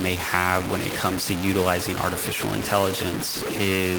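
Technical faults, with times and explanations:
Throughout: low bit depth without dither. Gritty, grainy distortion rides on every syllable and shifts as the speech moves, sitting only a few dB under it. That likely comes from truncating to 4 bits without dither, leaving rounding error that tracks the signal.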